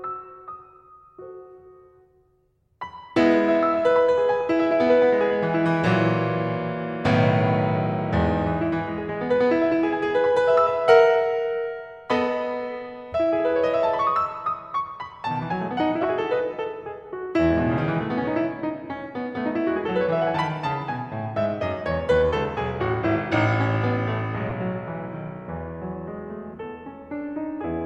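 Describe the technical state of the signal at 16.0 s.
A brief chirp-like burst of noise cuts across the music from 16.02 to 16.05 s, peaking around -10 dBFS. This is a corrupt frame decoded: flipped bits in about two compressed frames were played anyway, so misread gains and codes scattered energy into wrong frequencies.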